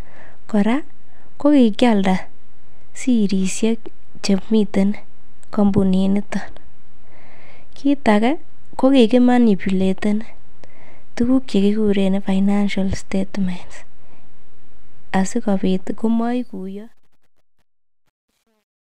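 From 16.01 s to 18.99 s the fade-out carries truncation distortion. An undithered stage, consistent with 10 bits, makes the tail gritty from 16.89 s.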